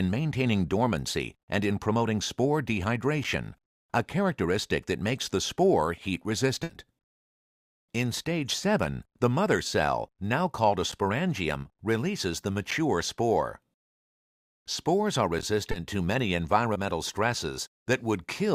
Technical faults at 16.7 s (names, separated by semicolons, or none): short concealed packet loss